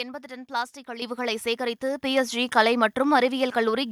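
The microphone volume stepped up twice: automatic input control judged the level too low and raised the device gain in single jumps. At 1.02 s the level rises by about 8 dB, then at 2.04 s by about 5 dB, with voice and background growing louder together.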